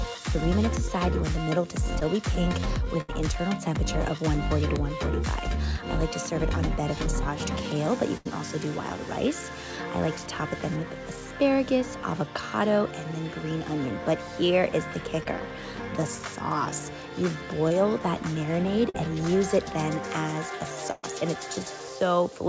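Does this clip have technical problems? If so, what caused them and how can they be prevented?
Yes. There are three kinds of network fault here, all in a call path that runs through G.722 and has nothing above 8 kHz.

Short concealed packet loss at 2.00–2.03 s: about 20 ms never arrived in time. The receiver extended the last sound to patch it, so you hear a quick smear. Forward error correction or a cleaner network path would help prevent it.

Burst of packet loss at 3.01–3.10 s and 8.17–8.27 s: roughly 80 ms went missing each time. The receiver held and faded the last sound, then jumped ahead past the missing piece. Redundant packets plus a slightly deeper jitter buffer would cover gaps that long.

Scattered short gaps between 15.2 and 21.1 s: about four separate dropouts, the longest around a tenth of a second. Each got patched by continuing the previous sound, which leaves little ticks and hiccups. 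A steadier connection, such as wired instead of congested Wi-Fi, would cut these down.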